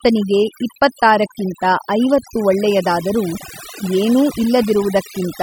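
Overdone noise removal runs throughout: an overly aggressive noise reducer cuts frequency bands near its noise estimate, leaving twinkling specks in near-silence and taking quiet parts of the speech with them.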